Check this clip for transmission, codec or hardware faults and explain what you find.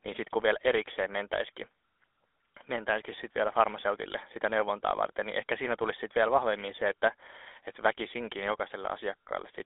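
The speech has a buzzy, gravelly roughness throughout, with nothing above about 3.8 kHz and the band held to roughly 300 Hz to 3.5 kHz. This is the GSM full-rate codec, at a quality that fits its 13 kbps rate. It models the vocal tract and drives it with sparse, regularly spaced pulses, keeping only a fraction of the excitation, so the fine detail of the voice is replaced by that coarse buzz.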